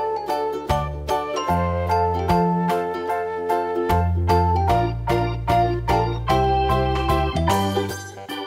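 A handful of samples, a fraction of a millisecond's worth, likely went missing from the stream at 5.36 s and again at 6.44 s, a fault known as dropped samples. Each time, the waveform jumps straight from one value to a later one with nothing in between. The gap is far too brief to remove any audible sound. Instead, each jump produces a single sharp click, which shows as a thin vertical line across the spectrum.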